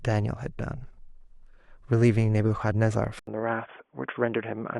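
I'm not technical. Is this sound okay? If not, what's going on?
No. At 3.19 s there is a brief gap of about 80 ms, then the speech turns dull and boxy, with nothing above 3.4 kHz. This is likely an input switched to a poorer device.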